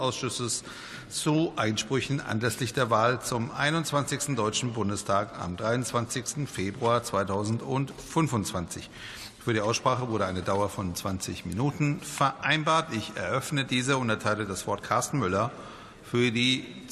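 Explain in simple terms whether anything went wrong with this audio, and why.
Nothing went wrong here: the signal holds steady the whole way, with no dropouts, distortion, glitches or other technical faults to be heard.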